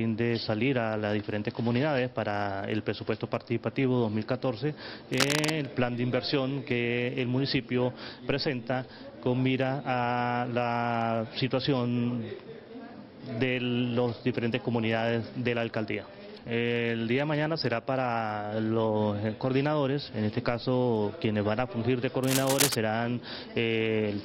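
From 5.12 to 5.51 s, and again from 22.23 to 22.77 s, a dense, ragged scratching and rustling sits over the sound, roughly as loud as the sound itself. This is cable scratch noise, likely from a worn cable, connector or control being moved. Each movement makes the contact resistance jump around rapidly, so irregular bursts of noise are added to the signal for as long as the contact is disturbed.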